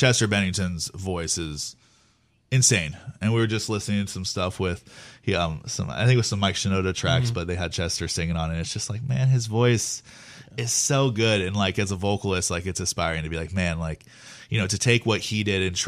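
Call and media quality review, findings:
No transport, device or processing faults found in the speech signal across the reviewed duration; levels and continuity are within normal limits.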